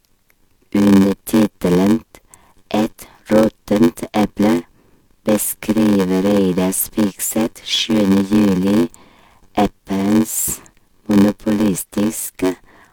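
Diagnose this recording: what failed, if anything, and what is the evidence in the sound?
The failure is at the driver or buffer stage: a block size mismatch (padded) that runs the length of the speech. A steady buzz at about 93.8 Hz sits under everything, and the speech plays at 0.861 times its proper speed. One stage hands over blocks shorter than the next stage reads, and the shortfall in each block is filled with silence. The buzz rate fits a 512-sample read block, and the slowdown is the ratio of the two block sizes.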